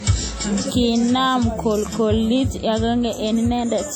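From the start, the speech carries the artefacts of a low-bitrate encode. Content still reaches about 20.1 kHz, so there is no clear cut-off. This is likely low-bitrate audio saved at a high bitrate. The second encode could not restore what the first removed.

From 0.52 to 0.56 s, chunks play out of order. One 20 ms chunk arrives one chunk late and plays after the chunk that should follow it. Nothing is missing. The wrong order leaves three hard joins, heard as a brief jumbled stutter.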